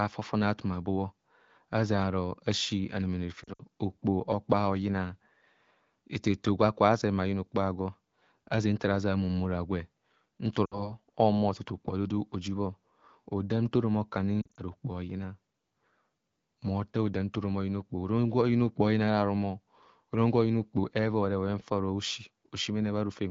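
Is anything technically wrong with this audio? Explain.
Yes, there are three short bursts of lost AMR speech frames. Radio errors corrupted frames, so the decoder repeated its last good pitch and vocal tract settings at falling gain. That gives brief smeared, warbly dips that fade quickly:

3.43 to 3.63 s, right after "azena aro asi anemene": about 100 ms lost in patches over 160 ms.
10.65 to 10.90 s, between "gwe nta" and "ohumo tu": about 60 ms lost.
14.42 to 14.61 s, after "nta orom aku": about 100 ms lost in patches over 160 ms.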